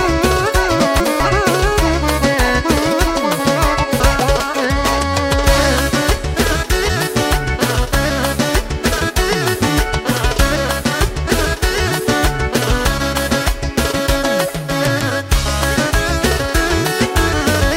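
Chunks out of order at 0.8–1.2 s and 4.0–4.4 s: a 200 ms chunk arrived one chunk late, swapping two chunks, so the sound jumbles briefly.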